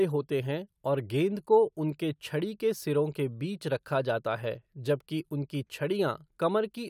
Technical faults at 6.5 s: none

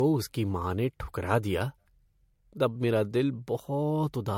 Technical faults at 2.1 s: generation loss

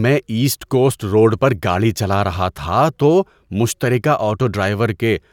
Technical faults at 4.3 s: none

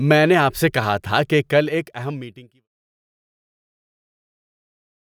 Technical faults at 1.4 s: none

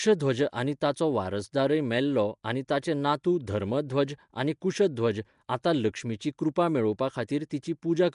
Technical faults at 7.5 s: Nellymoser compression; pre-echo

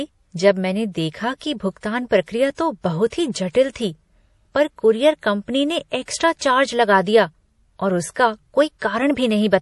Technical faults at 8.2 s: MP3 compression

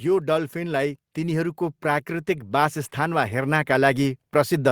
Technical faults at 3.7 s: automatic gain rising

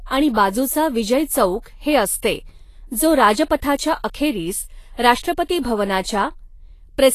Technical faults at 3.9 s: Vorbis compression

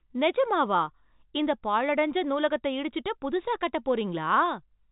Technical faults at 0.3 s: none

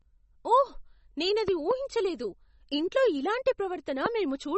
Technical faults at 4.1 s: MP3 compression; loud pop

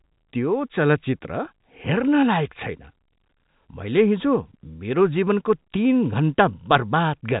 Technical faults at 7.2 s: none

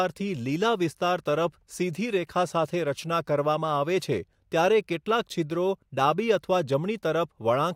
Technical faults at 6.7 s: none

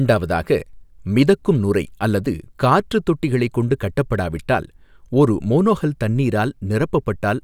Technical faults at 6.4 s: none

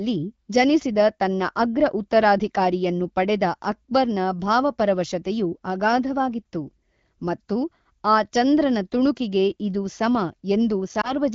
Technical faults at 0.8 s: none

